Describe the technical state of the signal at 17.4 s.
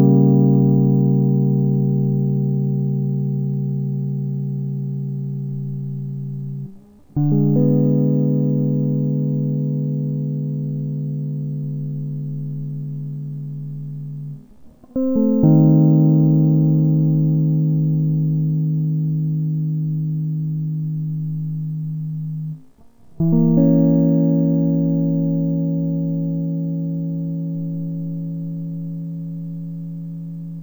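At 17.4 s the music plays at half speed and an octave low, as it does throughout: stereo read as mono, with interleaved left and right samples run together as one channel.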